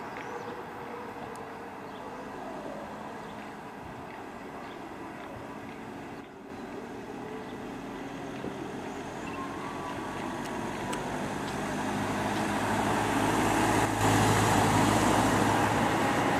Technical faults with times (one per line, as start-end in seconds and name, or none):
6.21-6.50 sudden gain jump
13.85-14.01 sudden gain jump